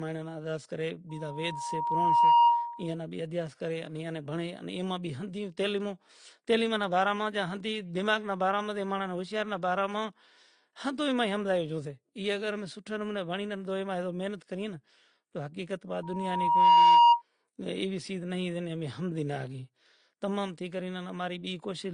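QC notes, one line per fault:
Throughout: transcoding between lossy codecs. Nothing is heard above 9.8 kHz, and two different kinds of codec artefact overlap across the speech. This is likely a chain in which low-rate AAC-LC, around 32 kbit/s, fed into Opus at around 48 kbit/s. Opus spent part of its budget re-encoding the first codec's smearing and added its own texture on top. The lowest cut-off in the chain persisted to the end.
1.09–2.96 s and 16.03–17.22 s: loudspeaker feedback squeal. A single 945 Hz tone swells up, first after "مائیڑے نا ادھیاس کرے" and clearing before "بھی ادھیاس", then again after "حقیقت وات". It takes about a second to build the first time and a little under a second the second time. It peaks at roughly 15 dB above the speech. The microphone was picking up its own loudspeaker, and loop gain above one at 945 Hz let that frequency keep growing.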